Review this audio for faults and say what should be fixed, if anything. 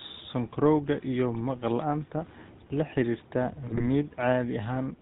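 The GSM full-rate codec colours the speech from start to finish, plainly audibly, which fits a 13 kbps full-rate stream. Its pulse excitation, keeping only every third sample, gives a buzzy, gravelly roughness, and nothing passes above 4 kHz. On a spectrogram, energy stops sharply at 4 kHz, with coarse striated harmonics below. Preventing this means carrying the call over a wideband codec such as AMR-WB instead of GSM full rate.

GSM bit errors break up the speech from 3.68 to 3.84 s. Corrupted filter, pitch and gain parameters distort the spectrum and send the level jumping frame by frame, heard as squawks, pops and gargling. The waveform shows sudden amplitude spikes, and the spectrogram shows smeared, blocky bands across that stretch. Preventing it means improving link quality or adding stronger channel coding and error concealment so corrupted frames are muted rather than decoded.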